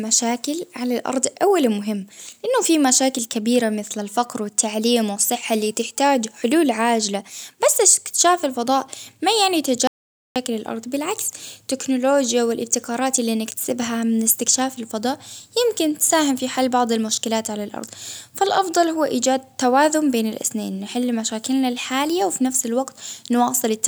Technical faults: audio dropout to silence

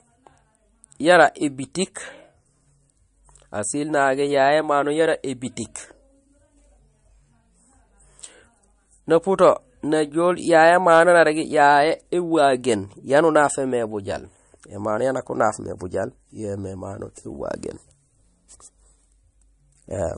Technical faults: MP3 compression

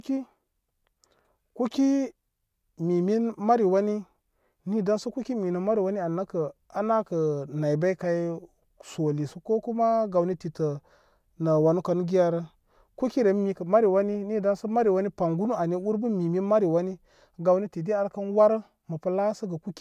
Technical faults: none

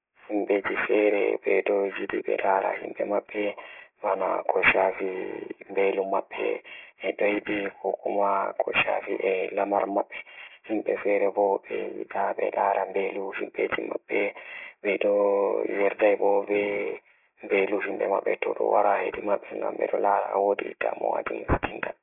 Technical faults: aliasing

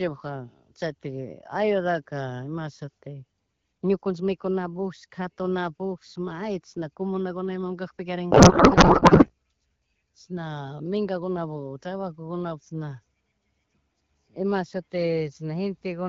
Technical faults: codec payload misread

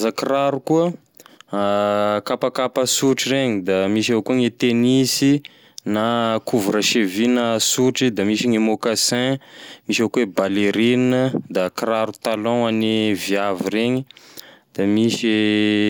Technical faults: none

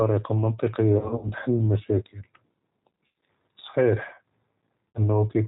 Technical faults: G.729 codec; VoIP packet loss concealed by the speech codec

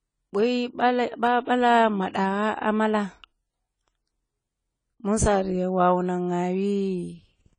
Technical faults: AAC compression

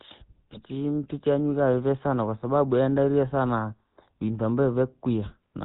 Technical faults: GSM full-rate codec; GSM bit errors

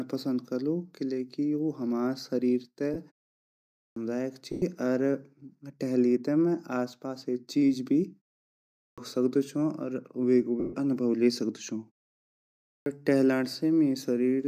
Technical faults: lost LE Audio frames; clipped start after a pause

